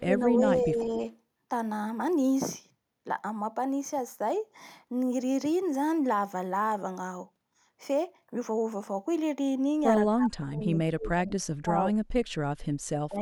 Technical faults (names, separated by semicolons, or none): speech suppressed in double talk